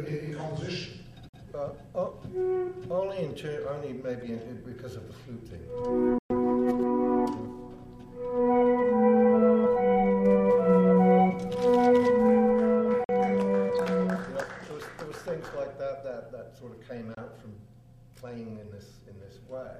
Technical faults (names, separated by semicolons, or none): Bluetooth dropout